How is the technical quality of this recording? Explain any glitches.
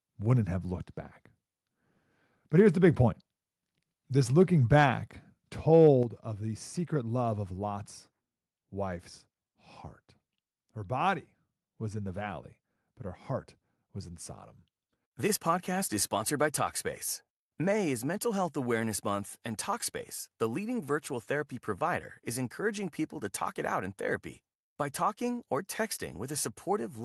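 The recording has two related level problems: brief clipping on loud peaks early in the clip, then a sudden drop in level.

From 2.58 to 2.89 s and again from 4.75 to 4.83 s, the loudest speech peaks take on a harsh, crackling edge. This is microphone overload, likely from the input gain being set too high so the converter runs out of headroom. The waveform tops are flattened, about 2 dB over full scale in the first event and about 1 dB in the second, affecting a small fraction of samples.

At 6.03 s, just before "of the secret love", the voice and background both drop by about 6 dB in a single step. This is the microphone volume being stepped down, likely by the call software's automatic gain control reacting to the earlier clipped peaks and lowering the device input level at once instead of fading it gradually.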